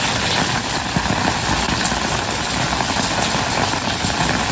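Short concealed packet loss occurs at 1.66 to 1.70 s. About 20 ms of the stream never arrived in time to be decoded, and the receiver covered the gap by extending the preceding sound, carrying its pitch forward if voiced or substituting shaped noise if not, before crossfading back into the real signal. The result is a brief smear in the sound. The call path's cut-off at 8 kHz fits a G.722 codec at 64 kbps.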